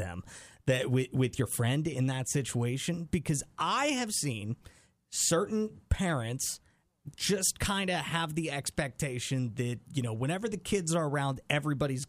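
No technical faults can be heard at any point in the recording.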